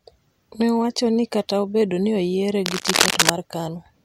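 From 2.66 s to 3.30 s, a burst of cable scratch noise runs over the speech for about two-thirds of a second, roughly as loud as the speech itself. It sounds like rough scratching and rustling. The likely cause is a worn cable or connector being moved, so its contact resistance fluctuates rapidly. On a waveform it shows as dense, jagged spikes; a spectrogram shows irregular broadband smears and vertical streaks across the band.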